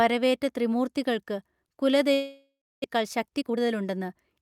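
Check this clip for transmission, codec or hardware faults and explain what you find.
Two transmission faults appear in this speech clip, both in its later part.

From 2.13 to 2.86 s, a long network dropout is the likely cause: the last sound is extended as a fading buzz or hiss, then about 300 ms of silence, and speech resumes with roughly 400 ms missing.

From 2.96 to 4.39 s, a jitter buffer speed-up trims short pitch-period slices to shed about 0.2 s of backlog, so speech runs 12% faster at unchanged pitch and sounds hurried.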